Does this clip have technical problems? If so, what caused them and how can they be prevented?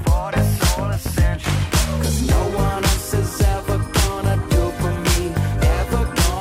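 No, there are no technical problems to point to in this clip. With nothing going wrong, there is no cause to trace and nothing that needs preventing.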